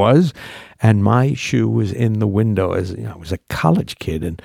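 No technical faults detected.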